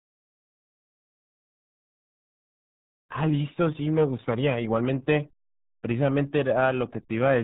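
Speech carrying RealAudio 14.4 codec damage from start to finish: nothing above 3.9 kHz, with a heavy gargling, muffled texture that fits an 8 kbit/s dial-up speech codec. Simple band-limiting would dull the highs but leave the remaining band clean, without this gargle.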